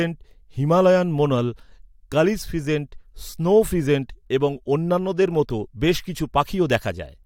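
No technical faults are audible anywhere in the speech.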